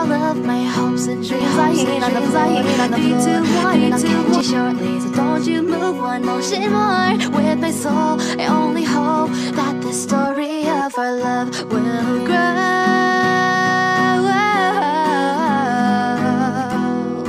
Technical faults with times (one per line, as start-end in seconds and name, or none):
1.41-4.41 doubled audio track